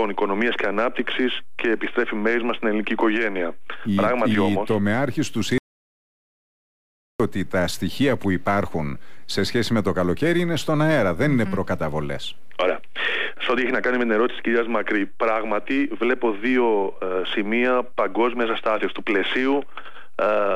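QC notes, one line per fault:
5.58–7.20 s, audio dropout to silence: the sound cuts off mid-flow and returns about 1.6 s later, with no room tone in the gap. The input was likely lost while writing continued. The waveform shows a flat line and the spectrogram a blank band.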